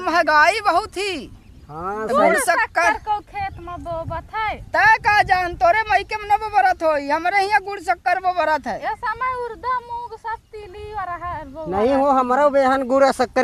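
No technical faults can be heard in this recording.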